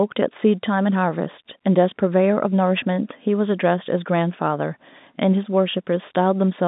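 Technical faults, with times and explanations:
No faults found; the speech sits in G.711 telephone coding, with the line band running from 150 Hz to 3.7 kHz and nothing above 3.8 kHz, as that format imposes.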